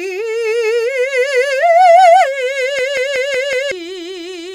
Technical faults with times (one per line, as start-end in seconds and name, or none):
2.79-3.72 system hang loop